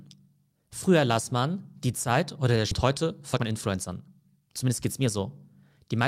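At 2.71 to 2.73 s there is a skip ahead: about a second of speech is simply missing, and the audio on either side is butted together with no silence or filler in between. The receiver discarded that stretch, most plausibly when its jitter buffer overflowed with later audio already queued. What separates this from a dropout or packet-loss concealment is the absence of any gap, hiss or smeared repeat. The speech just lurches forward mid-flow, and the delay shortens by roughly the same second.

From 2.85 to 5.07 s a jitter buffer speed-up follows, with the speech running at about 109% of normal rate. Having more audio queued than it targets, the receiver trims short pitch-period-sized slices again and again, shedding around a fifth of a second in total. The result sounds hurried but keeps its natural pitch, which distinguishes it from a resampling or clock-rate error, where faster playback would also raise the pitch. 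It also differs from the skip ahead, since nothing audibly disappears at any single moment.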